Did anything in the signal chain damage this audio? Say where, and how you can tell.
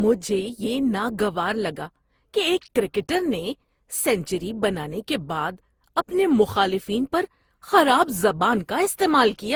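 Yes. The damage sits at the codec stage and runs through the whole clip. The speech sounds swirly, hollow and smeared, and consonant attacks blur, yet the spectrum still reaches about 20.1 kHz. That is more degradation than one encode at a rate fitting 64 kbit/s Opus would leave, which separates this generation loss from plain low-bitrate coding. The likely cause is repeated decoding and re-encoding, around fifteen passes, each quantising on a shifted frame grid so errors accumulate.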